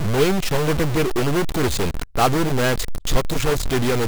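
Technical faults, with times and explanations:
Throughout, stuck bit: the speech carries a harsh, buzzy grit, and the pauses fill with steady noise rather than going quiet. That points to a data bit likely frozen at one value, a fairly high one with errors around -20 dBFS.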